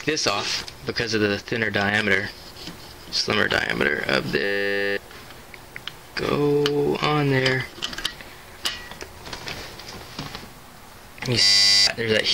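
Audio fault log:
4.44–4.97 s and 11.42–11.87 s, system hang loop: both times the sound collapses into a steady buzz at 100 Hz, then snaps back with about half a second of material gone. The machine or its driver stalled while the output hardware kept replaying the same ring buffer, so one 10 ms fragment repeated exactly; a loop that short fuses into a tone rather than a stutter, which fits a 10 ms buffer.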